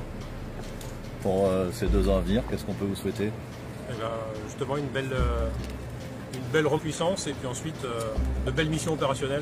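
At 6.74 s, for about 64 ms until 6.80 s, damaged data in the compressed stream breaks through. Corrupted bytes make the decoder misread those frames and lose sync. It then hunts for the next valid frame header. The result is a brief chirp or squawk.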